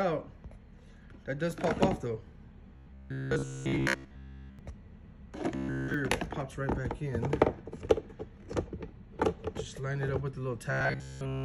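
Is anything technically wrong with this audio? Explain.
Yes, there's robotic sound from repeated short buffers in three stretches: 2.76 to 4.59 s, 5.55 to 5.94 s, and 10.72 s through to the end at 11.45 s. Each one turns into a rigid, metallic buzz pitched at 66.7 Hz that only loosely tracks the underlying sound. The likely cause is audio arriving too slowly, so playback keeps looping a tiny slice of about 15 ms (one over 66.7 Hz). In these stretches it's essentially all repeats, with the real audio skipped.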